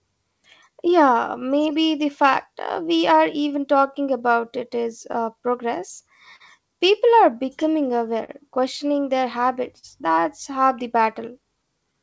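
Throughout the speech, clock drift between sender and receiver is at work: the sending clock runs roughly 3% slow, so the jitter buffer keeps draining. On a waveform, the syllables sit slightly further apart than they should, and the spacing stretches unevenly over the whole recording.

From 0.70 s to 11.94 s, repeated timing corrections pad the stream, playing it at about 98% speed and adding roughly 200 ms overall. They are heard as a faintly dragging, uneven tempo. A spectrogram shows occasional slightly lengthened harmonic segments with no clean seams.

Between 3.89 s and 5.15 s, scattered short gaps appear, a handful of holes, the longest around 10 ms, that the receiver bridged by continuing the last sound. They leave tiny ticks or smears, visible as brief frozen columns in the spectrogram.

At 6.36 to 6.42 s, a short stall from a late packet holds the current sound for 40 ms before resuming without loss. 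It is heard as a sound held too long, with a slight buzz or dip. On a spectrogram, the harmonics run flat and static for that stretch.

From 7.62 s to 8.30 s, more scattered short gaps follow: about three, the longest roughly 40 ms, together covering around 7% of that span. These smears show as smooth, repeated-looking patches in the waveform.

At 9.79 to 9.85 s, a second stall stretches the sound by 41 ms in the same way, giving another brief held moment with a flattened spectral band. Across the clip, the call path's G.722 coding leaves nothing above 8 kHz, which fits a 64 kbps stream.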